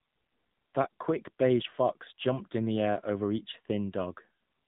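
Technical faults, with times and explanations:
Throughout, AMR narrowband mobile codec: nothing above 3.8 kHz survives, and the speech sounds buzzy and synthetic as each 20 ms frame is rebuilt from a vocal-tract model fed a few pulses. That texture, beyond mere dullness, sets it apart from a low-pass filter and fits a mode around 7.4 kbps.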